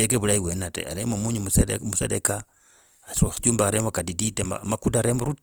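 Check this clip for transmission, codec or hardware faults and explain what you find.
The clip carries one codec fault, present from start to finish: Opus compression. Its damage is plainly audible, and its likely cause is Opus running in its music (CELT) mode at a low rate, consistent with about 24 kbps. CELT preserves each band's energy but, short of bits, fills fine detail by folding lower bands or injecting noise, so the speech sounds grainy and rough. Unlike MP3, there are few spectral holes, so it swirls less. Bandwidth stays full, extending to 20.2 kHz, rather than the muffled, narrowed sound of its speech mode.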